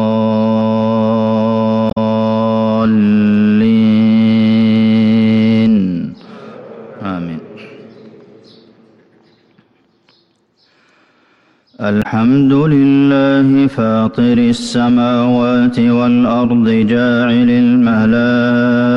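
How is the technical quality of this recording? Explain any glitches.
The recording is marred by two brief glitches, at 1.87 to 1.98 s and again at 11.99 to 12.06 s, each lasting around a tenth of a second or less. Both are heard as a short chirp, squawk, click or brief hole that interrupts the sound abruptly. They come from damaged data in a compressed stream: bytes in those stretches of the file were lost or corrupted, so the decoder misread the affected frames, lost sync, and produced garbled output until it locked onto the next valid frame header.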